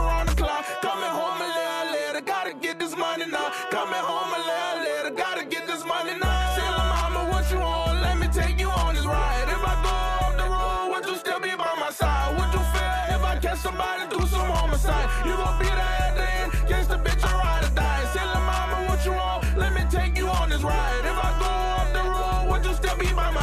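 A loud pop occurs from 12.02 to 12.04 s: a single sharp click, peaking a few decibels above the surrounding sound, which carries on underneath without a break. The likely cause is a sudden voltage step or spike entering the signal chain, such as a plug being seated, a switch contact or a static discharge. The circuitry downstream shaped that brief pulse into the short, hard transient heard here, laid over the audio.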